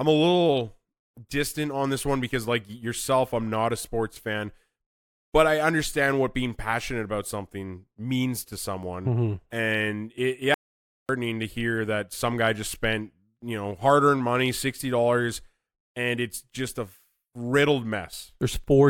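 Speech recording with one audio dropout to silence from 10.54 to 11.09 s, after "and it". About 0.55 s goes dead, with no room tone, until "to hear that some". The likely cause is a lost input.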